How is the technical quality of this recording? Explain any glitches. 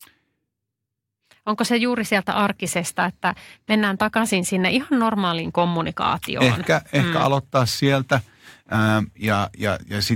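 No technical glitches are audible.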